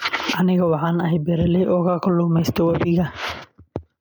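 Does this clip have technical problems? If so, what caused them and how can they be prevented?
Yes, there's gain pumping right through the speech: the gain swings by around 10 dB, pulled down under each loud syllable, leaving everything squashed. The likely cause is input gain set far too high, with a fast limiter clamping down constantly. Keep the preamp gain lower and the limiter as a safety net, not a constant leveller.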